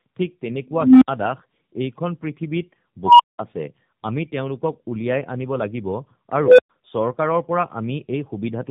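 Tandem speech coding runs throughout: the speech passes through two AMR-NB coders with a G.711 link between them, so each stage re-encodes the previous one's damage, leaving it rough, warbly and empty above 3.8 kHz. Unstable filter faults occur at 0.71–1.08 s, 3.05–3.39 s and 6.40–6.70 s. A runaway recursive filter swells a tone near 300 Hz, then 1 kHz, then 500 Hz over 0.30, 0.14 and 0.18 s until it overflows, followed by silences of 64, 192 and 112 ms.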